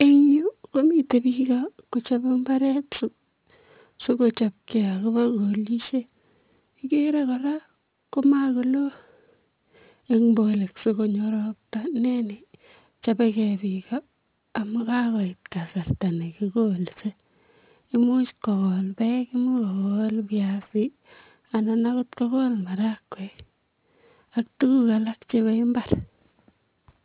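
Aliasing runs throughout: the speech was downsampled without an anti-alias filter, consistent with an 8 kHz rate, so content above 4 kHz folds back as gritty, metallic sibilance roughly 25 dB down.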